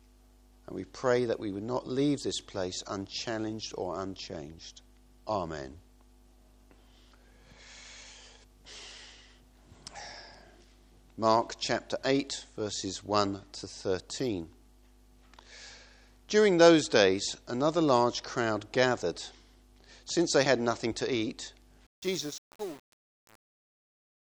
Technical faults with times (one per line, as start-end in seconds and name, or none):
21.87-24.30 truncation distortion on a fade